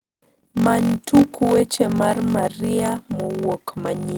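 Throughout the speech, a block size mismatch (padded) zero-fills each 1024-sample read, producing a 46.9 Hz buzz and slowing delivery to 0.861 times normal speed with timbre unchanged.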